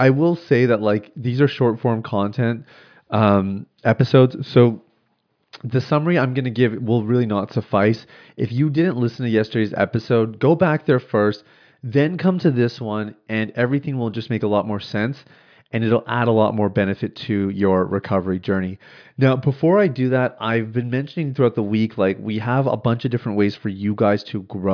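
No technical faults are audible anywhere in the recording.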